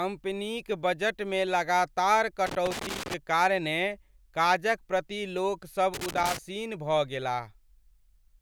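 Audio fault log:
2.46–3.14 s and 5.94–6.38 s, loose connector crackle: irregular bursts of scratchy crackle break up the speech, the second arriving right after "प्रति लोकसभ". A worn or dirty contact in the signal path is shifting and rapidly making and breaking, so the audio is chopped on and off many times in quick succession, and any DC on the line turns each break into a pop, giving the ragged, gritty texture.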